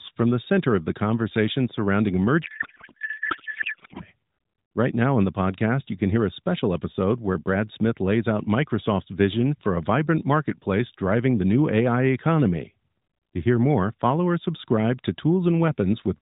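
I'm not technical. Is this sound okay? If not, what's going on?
No. From about 2.4 to 4.0 s, right after "of the conversation surrounding", the speech turns into garbled, warbling noise that barely follows it. This is a codec payload misread: the phone-call AMR codec's data was packed one way and unpacked another, so the decoder reads every field in the wrong place. Unlike a dropout, the sound doesn't go silent. It keeps going as nonsense, then snaps back to the light phone-call quality.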